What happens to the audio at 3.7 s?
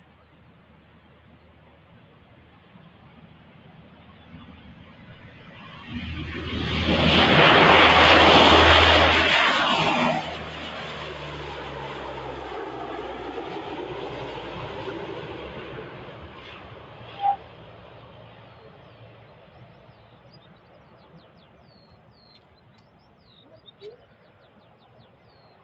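A speech-tuned noise suppressor, active throughout the clip, treats sustained tones and tails as noise, pulling them down by around 15 dB so the sound pumps and thins.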